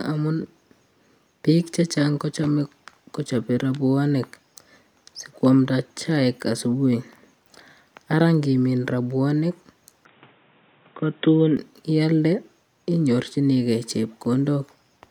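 After "ngimin robuanik", from 10.05 to 11.57 s, the speech turns boxy, losing everything above 3.8 kHz and gaining a faint new noise floor, likely from an input switched to a poorer device.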